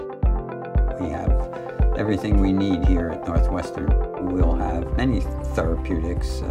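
A faint hiss of sample clock jitter runs through the whole clip. Timing errors of under a microsecond leave noise roughly 55 dB below the signal, rising with loud, steep passages. On a spectrogram it shows as a haze that thickens at high frequencies during loud moments and clears in silence.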